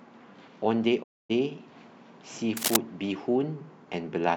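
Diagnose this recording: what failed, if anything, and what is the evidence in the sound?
Two things went wrong here, at two different stages. The first is a digital broadcast dropout on the network/codec side. At 1.02 s the speech fades out over about 20 ms and stays silent until 1.32 s, a hole of roughly a quarter second. That's the receiver muting because frames either didn't arrive or failed their checks. The gap length points to a run of about eight lost frames, and whatever was said in that window is simply gone.

The second is in the analogue wiring. From 2.57 to 2.77 s there's a dense, ragged burst of scratchy noise sitting right on top of the speech, about as loud as the speech itself. That's cable scratch noise, likely from a worn connector or cable being moved so its contact resistance jumps around rapidly and dumps noise into the signal.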